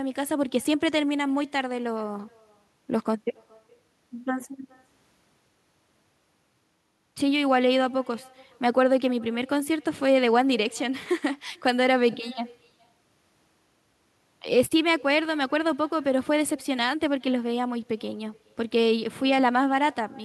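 Every phrase in this speech recording is trailed, roughly 0.4 s later, by a faint, thin copy sitting about 28 dB below the direct sound throughout. That is echo with no canceller: the far end's loudspeaker output re-enters its microphone and returns uncancelled after the network round trip.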